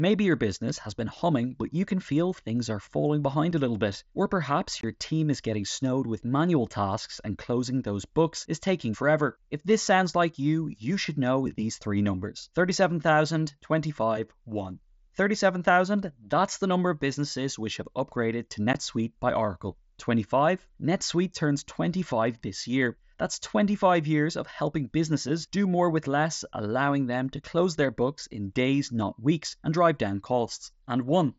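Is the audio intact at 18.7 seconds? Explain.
No. At 18.73 s there is unconcealed Bluetooth headset packet loss: 15 ms of audio between headset and phone went missing, which fits two lost mSBC packets, and nothing filled the gap, so the speech drops to a brief hole with abrupt edges.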